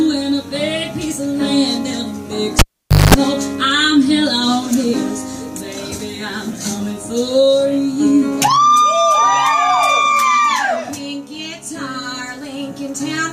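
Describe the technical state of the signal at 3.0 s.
At 3.0 s you're right in the middle of a cable pulled and plugged in, running from 2.59 to 3.14 s. A pop as the lead comes out, about half a second of near silence, then roughly 0.2 s of 50 Hz mains buzz while only the tip touches, and a second pop as the signal comes back.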